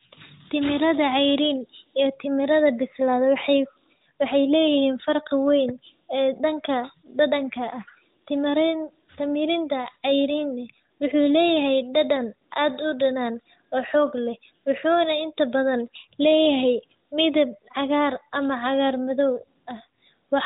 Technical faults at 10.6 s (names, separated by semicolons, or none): none